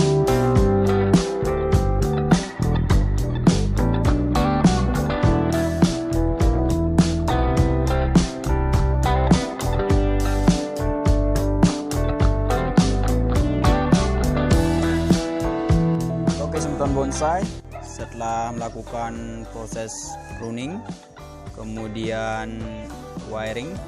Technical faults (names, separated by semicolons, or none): none